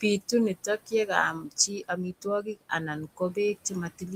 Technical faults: noise suppressor artifacts; speech cut by the noise suppressor

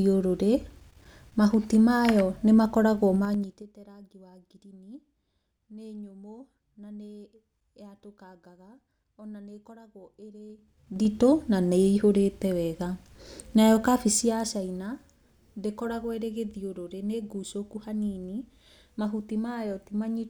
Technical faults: zipper noise

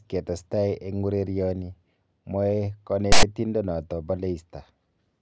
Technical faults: file tags played as audio

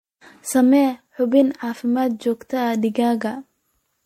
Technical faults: generation loss

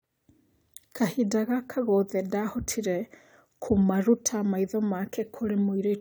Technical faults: none

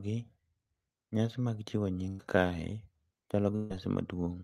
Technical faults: burst of packet loss

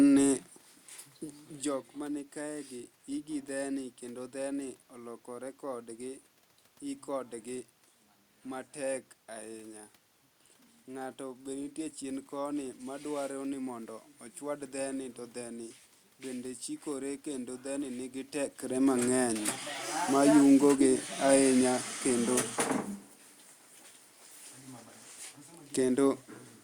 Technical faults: none

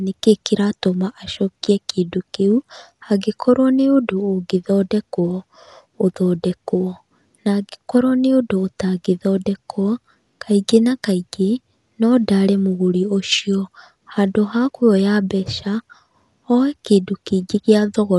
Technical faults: Dolby Digital compression

